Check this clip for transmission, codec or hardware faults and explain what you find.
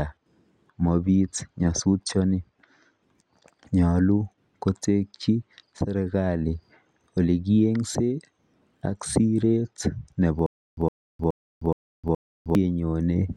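One fault is present in this speech, a stutter with silent gaps from 10.46 to 12.55 s. The stream likely stalled and replayed its last 112 ms fragment at each retry. That burst returns five times, every 421 ms, with 309 ms of digital silence between, and the intended speech is lost.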